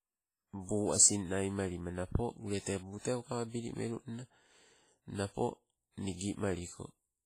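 WMA compression runs throughout this speech clip, with heavy codec damage and nothing above 15.5 kHz. The sound rings and smears, and its hiss breathes with the signal, likely from a transform coder spreading quantisation noise across long blocks, consistent with a bitrate around 24 kbps.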